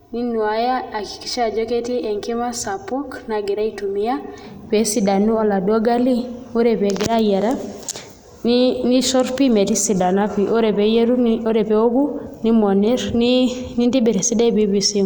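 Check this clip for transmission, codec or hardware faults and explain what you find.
One fault is present: channel delay (comb filtering), from the start of the clip to 4.44 s, ending just before "pee esidanu oladuo gali". One channel arrives late by roughly 3 ms, and the two channels are summed to mono. Content common to both cancels at evenly spaced frequencies, the first near 200 Hz. The speech sounds hollow and phasey, with fixed notches colouring it. The effect ends at 4.44 s.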